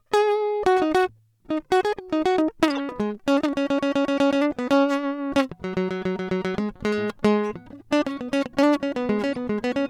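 At 2.70 to 2.79 s the music breaks into a short burst of noise. It is a corrupt frame decoded. Flipped bits in a few compressed frames gave wrong gains and codes. At 9.34 to 9.37 s a quieter blip follows.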